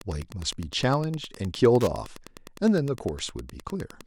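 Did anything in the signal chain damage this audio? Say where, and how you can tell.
Yes. Wi-Fi interference enters at the analogue wiring for the whole clip: a steady tick every 102.4 ms, roughly 25 dB under the speech, as a nearby radio's beacon is rectified by the circuit. A spectrogram shows evenly spaced thin vertical lines; the waveform, regular spikes.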